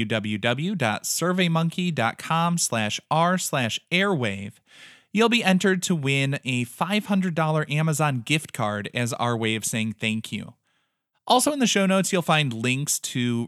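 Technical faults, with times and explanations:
No technical faults are audible in this speech.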